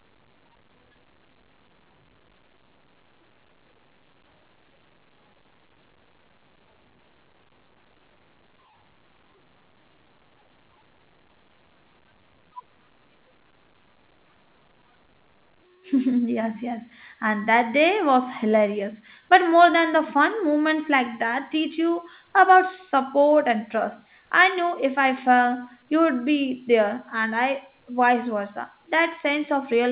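Nothing here calls for comment: the speech comes over an ordinary call path, with the band topping out around 4 kHz, which fits a 64 kbps G.711 A-law link.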